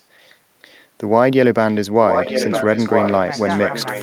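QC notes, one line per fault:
0.13–0.36 s, echo leak: the far end's echo canceller has likely let part of its loudspeaker pickup through and sent it back. A copy of the speech about 0.96 s late sits very faintly under the direct sound, far below it in level, as a brief ghostly trace.
2.09 s to the end, echo leak: the same 0.96 s delayed copy returns much stronger, nearly as loud as the speech, so two overlapping versions compete and blur it.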